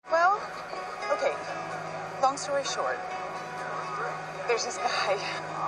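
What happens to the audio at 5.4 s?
At 5.38 s, damaged data in the compressed stream makes the decoder misread a frame and resync, leaving a brief chirp, squawk, click or short hole.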